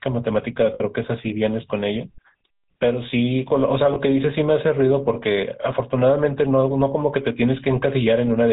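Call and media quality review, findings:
GSM full-rate codec, whole clip: speech coded through the first GSM codec, consistent with 13 kbps full rate. Excitation kept as sparse regular pulses, band stops at 4 kHz. Result: plainly audible buzzy, gravelly roughness and dull, narrow tone throughout.

Lost GSM frames, 0.74–0.81 s and 3.94–3.97 s: bad frames concealed by repeating the last good frame's settings. Sound is briefly held as a rough metallic ring. Longer at 0.74 s, short blip at 3.94 s.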